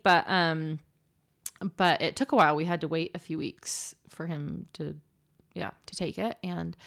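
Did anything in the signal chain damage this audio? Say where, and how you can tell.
No, nothing in the chain audibly damaged this speech, and no stage from capture to playback leaves a mark I can hear.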